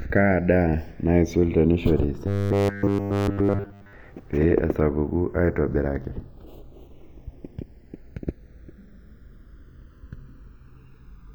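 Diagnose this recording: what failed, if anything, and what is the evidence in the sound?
A slow flanging sweeps through the speech from start to finish: the channels drift apart because two devices run on separate converter clocks about 100 ppm apart, reaching under a millisecond of offset.

From 2.27 to 3.93 s the speech becomes a rigid, metallic 100 Hz buzz, likely robotic sound from repeated short buffers: a 10 ms block replayed in place of nearly all the real audio.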